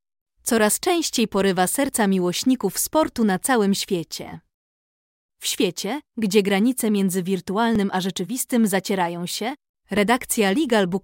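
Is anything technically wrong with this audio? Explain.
Yes. At 1.89, 7.76 and 9.97 s the speech jumps, likely a dropped buffer (overrun): the hardware overwrote a slice of roughly 10 ms before the program collected it, so the audio on either side is spliced together.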